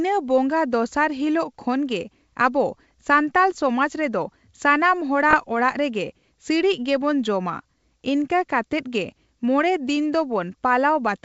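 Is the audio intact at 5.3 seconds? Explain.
No. From 5.29 to 5.35 s there are bit errors on an ADPCM link, heard as pops and rough, level-jumping bursts. Each flipped bit knocks the decoder's step size and predictor off, so the error rings on rather than clicking once. Packet loss would instead leave a gap or a smeared repeat.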